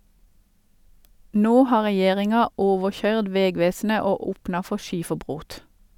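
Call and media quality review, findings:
No technical faults found; the speech signal holds steady levels and continuity throughout, with nothing in the audio path calling for a ticket.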